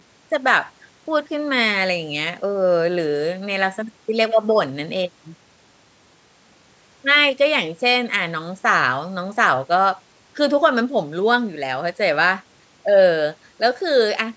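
Nothing technically wrong turns up in this bit of speech: it has simply been through a call's microphone processing, which trims away the lowest bass and leaves nothing above 8 kHz, and that is just how such a path normally sounds.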